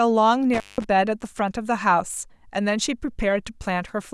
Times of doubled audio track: none

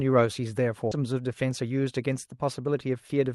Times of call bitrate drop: none

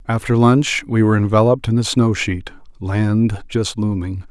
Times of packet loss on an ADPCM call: none

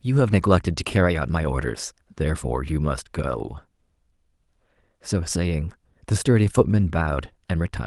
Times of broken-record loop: none

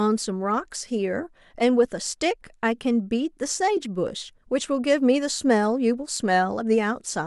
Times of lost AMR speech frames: none

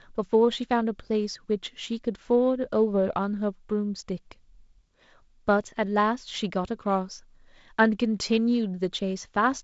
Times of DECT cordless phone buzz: none

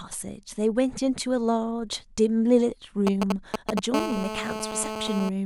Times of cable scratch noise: none

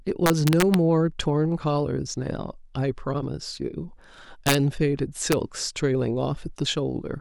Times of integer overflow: 0.26-0.74, 4.47-4.54, 5.32

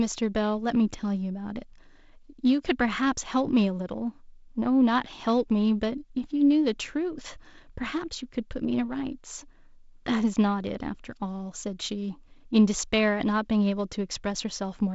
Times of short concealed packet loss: none

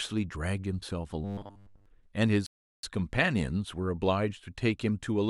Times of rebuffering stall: 2.46-2.83

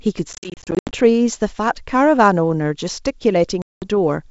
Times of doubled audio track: none

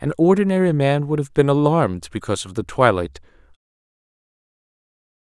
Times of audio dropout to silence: none

